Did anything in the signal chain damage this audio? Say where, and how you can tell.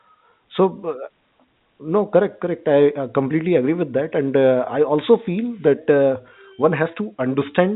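No, nothing in the signal chain has damaged this speech. It has the sound of G.711 telephone coding doing its normal job: nothing above 4 kHz and a faint quantisation hiss that rises and falls with the level of the speech.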